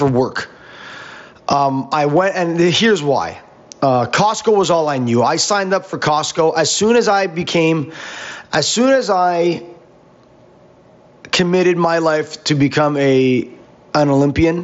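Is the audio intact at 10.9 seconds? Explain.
No. At 10.9 seconds the speech has gain pumping, which runs through the whole clip. Loud and soft parts end up closer in level, with a gain swing of around 20 dB, and the sound is squashed. The likely cause is gain set far too high, with a fast limiter clamping every peak. The Bluetooth mSBC link is working normally, passing sound up to about 7.7 kHz.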